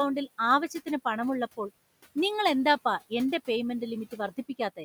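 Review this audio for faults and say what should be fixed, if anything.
There are noise suppressor artifacts throughout the whole clip. The suppressor is pulling down whatever frequency bands it judges to be steady noise, frame by frame, by about 18 dB. So the room noise, which sits about 20 dB under the speech, drops away in the gaps between words and then comes back up underneath them whenever someone talks. That pumping is what gives it away. To prevent it, back the suppression off to a gentler reduction so the room noise stays at a steady level.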